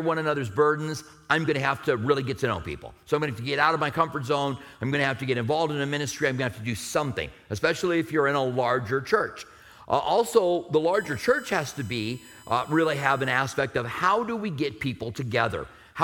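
From 10.94 to 13.39 s there's USB whine, bus current at 1 kHz leaking into the audio, strongest at 8 kHz, sitting roughly 25 dB under the sound.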